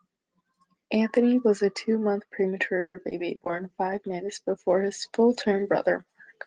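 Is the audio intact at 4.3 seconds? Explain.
No. At 4.3 seconds two faults overlap.

A call bitrate drop runs from 3.45 to 6.12 s. The call's bandwidth estimate fell, so the Opus encoder was told to cut its rate from 32 kbps to 18 kbps, and it held near that floor for about 2.5 s. With fewer bits for each frame, the speech is coded more coarsely. It sounds rougher and grainier than the audio before 3.45 s until the rate recovers.

A jitter buffer slow-down also covers this moment, from 3.51 to 4.72 s. The receiver's buffer was running low or had just raised its target delay, so it repeated single pitch periods and bits of pauses to build a reserve. That adds 86 ms over the span and plays the speech at about 93% speed. Pitch stays the same, but sounds are stretched and can carry a slight warble.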